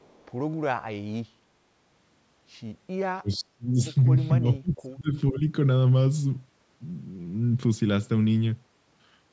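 From 0.00 to 0.32 s there is an echo leak: a very faint delayed copy of speech, roughly 40 dB below the main talker and trailing by about 448 ms. The likely cause is a far end playing the call over a loudspeaker, with its echo canceller leaving a residue of what its microphone picked up and returning it down the line. It is audible only as a ghost at the opening.

Speech suppressed in double talk follows, at 3.22 to 3.78 s and again at 4.39 to 5.44 s. In each span the talker's level sinks by up to around 30 dB, totalling roughly half a second in the first span and roughly 0.7 s in the second. This is likely the echo canceller meeting simultaneous speech from both ends, failing to separate the local voice from loudspeaker echo, and attenuating everything.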